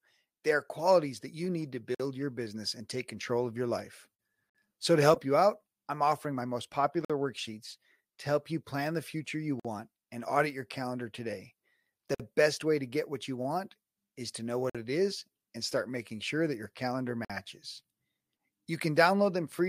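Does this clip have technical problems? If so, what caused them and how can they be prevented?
Yes. There is a gap between chunks at 1.95, 4.50, 7.05, 9.60, 12.15, 14.70 and 17.25 s: seven hard-edged holes of silence, each 50 ms long, recurring every 2.55 s. The speech arrives in 2.5 s chunks, and the playback or storage path inserts silence at every join, likely from codec padding or a player starting each chunk late. Nothing is lost, but the flow is repeatedly interrupted. To prevent it, trim codec padding and schedule each chunk to start gaplessly at the previous chunk's end.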